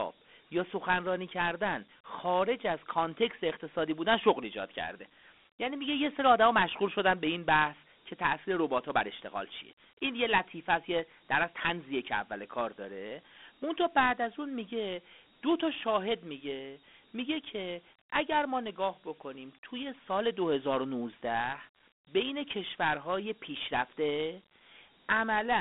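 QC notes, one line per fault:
Throughout, Dialogic VOX ADPCM: phone-band speech, 200 Hz to 3.6 kHz, nothing past 3.9 kHz, with clear grit riding the voice, which fits coarse 4-bit ADPCM at 32 kbps.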